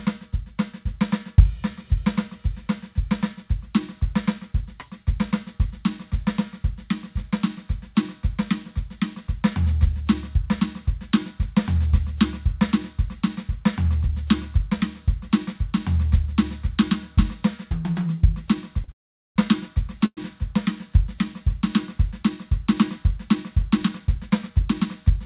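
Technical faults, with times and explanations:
18.84 s: short stall from a late packet. The music holds its last sound for about 37 ms. A packet arrived late and the jitter buffer ran dry. The receiver stretched the sound until the packet came. Nothing is lost, and the music resumes from the same point.
18.92 to 19.38 s and 20.06 to 20.19 s: call audio freeze. The music stops twice, for 440 ms and then 112 ms. The last sound fades to silence, which lasts about 430 ms the first time and 60 ms the second. Held-up packets likely emptied the jitter buffer. Playback then continues where it stopped, so the pause is inserted and nothing is skipped.
23.88 to 24.86 s: jitter buffer speed-up. The music runs about 8% fast and keeps its pitch. The tempo lurches forward. Delayed audio had built up in the buffer. The receiver trimmed many tiny pitch-period slices, around 70 ms in total, to cut the delay.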